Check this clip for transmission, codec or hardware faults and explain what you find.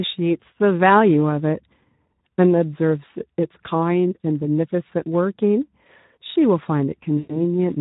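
Two faults are present: Speex codec coding throughout, and a short burst of VoIP packet loss concealed by the speech codec near the end.

Speex codec damage runs across the whole speech clip. The excitation is starved of bits, which fits roughly 11 kbps. Voices sound hoarse and noisy.

VoIP packet loss concealed by the speech codec occurs from 7.17 to 7.41 s. About 120 ms went missing, fitting six lost frames. The decoder extended its last pitch and filter, producing a fading buzzy tone or coloured noise.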